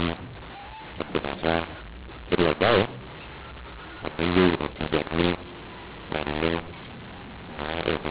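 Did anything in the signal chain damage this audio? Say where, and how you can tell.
Yes, at the codec stage: the mu-law and A-law decoding is mixed up for the whole clip. The G.711 stream was written as mu-law but decoded with the A-law table. Because the two laws map their 8-bit codes to different amplitude steps, every level comes out wrong. Some samples swell, others shrink, and near-silent values jump well above zero. The speech sounds harsh and gritty throughout, and the pauses fill with noise. The band still stops below 4 kHz, as expected at 8 kHz.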